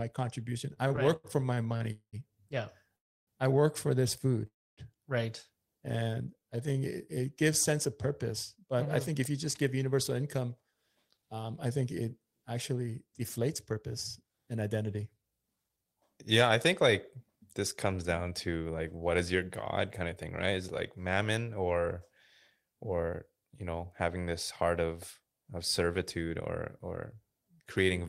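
From 0.73 to 1.83 s the speech drags and catches in short hiccups: ten brief stalls, the longest 75 ms, together stretching this stretch by about 0.23 s, roughly a fifth of the span. These are repeated stalls (stutter). Packets kept arriving late, so the receiver's jitter buffer kept running dry, and each time it carried the last sound forward until more audio came in. Nothing is lost. The speech is only held back and broken up.

Three call audio freezes follow, at 1.92–2.16 s, 2.97–3.30 s and 4.47–4.80 s. In each, the sound hangs on as a fading tail and then drops out. The silent part is 80 ms in the first, and about 0.3 s and 0.26 s in the later two. Speech then resumes exactly where it stopped, so each freeze inserts a gap of about 0.21, 0.31 and 0.30 s rather than removing anything. The likely cause is packets held up in transit, which emptied the jitter buffer until they arrived and pushed the playout delay back by that amount.

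Between 5.78 and 7.16 s the speech runs at about 92% of normal speed while keeping its pitch, so syllables sound drawn out. This is a jitter buffer slow-down. With its reserve low, the receiver repeated single pitch periods and slivers of pauses to stretch the audio, adding about 118 ms in total to rebuild its cushion.

From 8.55 to 15.85 s the opposite happens: the speech sounds hurried, running at about 109% speed with the pitch unchanged. This jitter buffer speed-up came from the buffer holding more audio than it aims for, likely once delayed packets arrived together. To cut the excess delay, the receiver trimmed short pieces of one or a few pitch periods over and over, removing roughly 0.7 s across the stretch.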